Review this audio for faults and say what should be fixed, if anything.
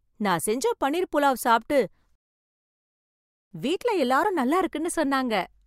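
A rebuffering stall runs from 2.15 s to 3.51 s. The speech breaks off after "பன்னீர் புலாவ் சாப்பிட்டு" and falls to silence, then picks up with "வீட்ல எல்லாரும் நல்லா" exactly where it stopped. The player used up its downloaded audio and had to wait for more to arrive, so no speech is missing, but about 1.36 s of dead air is inserted mid-sentence. Larger playback buffering or adaptive bitrate switching would let playback continue through the delivery shortfall without stopping.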